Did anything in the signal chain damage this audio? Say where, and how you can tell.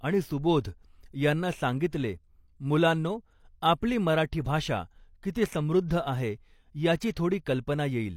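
Yes. Pre-echo at 5.32 to 5.35 s, just after "मराठी भाषा", and at 7.11 to 7.16 s, just after "आहे याची", points to the codec stage. A short hiss runs ahead of each sharp speech onset, spreading about 26 ms before the first and 54 ms before the second, and the onsets themselves sound smeared. The transform coder spread quantisation noise sized for the loud attack across its whole block, so the noise also fills the quiet moment before the attack.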